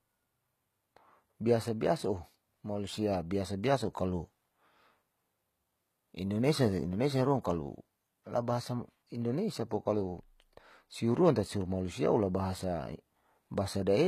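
Speech here, and the whole thing carries HE-AAC compression damage you can plainly hear. Nothing survives above 14.9 kHz, and the treble below that sounds rebuilt rather than real. The top end has been copied up from lower bands and only roughly shaped, so the harmonics don't line up and the s sounds come out gritty and a bit lispy. That's likely spectral band replication working hard at a very low bitrate, around 20 kbps.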